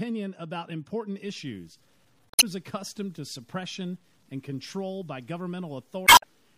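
From the first moment the speech sounds watery and swirly, with smeared consonant attacks and metallic chirps on s sounds, likely from MP3 compression at a low bitrate, around 64 kbps. A spectrogram would show a flat treble cutoff and isolated high-frequency patches flickering on and off between frames.

After "about important", at 1.26 s and running to the end, the sound turns gritty and grainy, with quiet passages sputtering or dropping to silence. This is likely low bit depth without dither, with samples truncated to what sounds like about 8 bits. The error follows the signal, leaving distortion roughly 35 dB below it. On the waveform, quiet stretches appear as coarse stair-steps, and the spectrogram shows a signal-dependent noise haze.

Two bursts of damaged data in a compressed stream occur at 2.29 to 2.43 s and at 6.04 to 6.24 s. In each, the decoder misreads corrupted frames and resynchronises on a later header, producing a brief glitch. 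Both appear as abrupt vertical smears or gaps in the spectrogram, with a discontinuity in the waveform.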